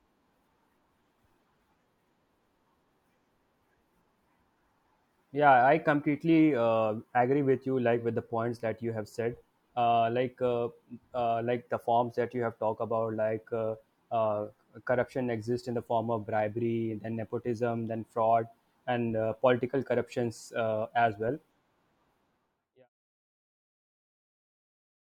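Speech clip with nothing technically wrong to report; the level eases out in a smooth editorial fade from around 22 s to 22.9 s, with no click or hard edge.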